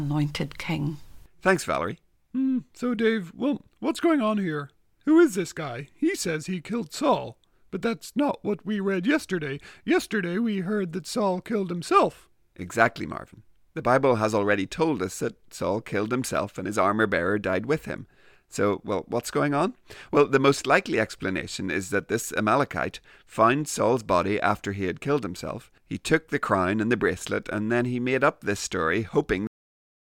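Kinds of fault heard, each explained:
Cut-off end: The final stretch of the recording never reached the output, so the speech halts partway through a sound at 29.47 s instead of finishing naturally. There is no trailing syllable, breath or room decay. The level falls straight to digital silence for the remaining half second or so. This points to the last buffers of audio being lost before they were written to the file or sent to the playback device.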